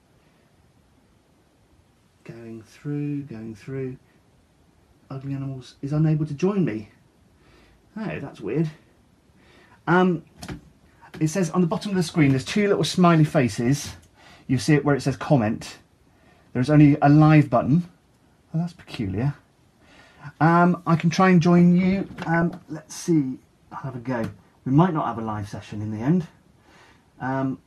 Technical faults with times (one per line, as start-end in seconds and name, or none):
13.67-13.78 DAB burbling
17.59-17.66 DAB burbling
22.34-22.51 DAB burbling